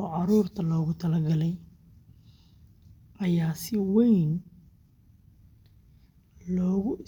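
Speech recording with nothing technically wrong to point to, so there are no times or causes to give.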